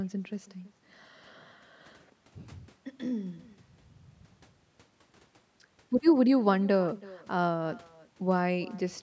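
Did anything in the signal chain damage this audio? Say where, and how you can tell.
Yes. The damage comes from the call path: an echo with no canceller runs through the whole speech clip. The far end's loudspeaker feeds its microphone, and nothing subtracts that, so every phrase returns roughly 300 ms later at about 23 dB below the direct sound, thinner. On a spectrogram, already band-limited to 8 kHz by normal call microphone processing, each syllable's energy pattern reappears as a faint copy shifted right. The waveform shows low ghost bursts trailing each phrase.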